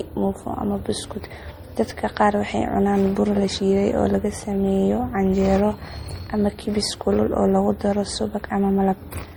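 Throughout the speech, two different kinds of compression artefact sit on top of each other. The top end stops at about 20.2 kHz. One layer fits an MP3-style coder, and a second layer fits Opus. The cause is likely transcoding between lossy codecs, with MP3 and then Opus, each at about 48 kbit/s. The second codec wasted bits re-encoding the first codec's damage and added its own.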